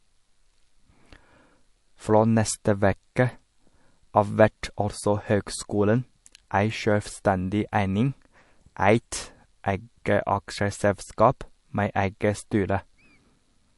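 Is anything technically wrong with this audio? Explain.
Yes. Throughout the speech there is plainly audible codec damage, and nothing is present above 11.3 kHz. The likely cause is MP3 compression at a low bitrate, which fits about 48 kbps. With too few bits, the encoder discards weaker frequency components, and these flicker in and out between frames. It also applies a fixed treble cutoff. The result is a watery, swirling texture, metallic chirping on s sounds, and softened consonant onsets.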